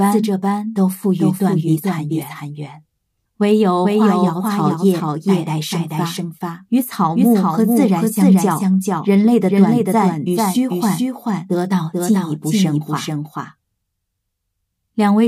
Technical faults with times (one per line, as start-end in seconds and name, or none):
0.00-15.27 doubled audio track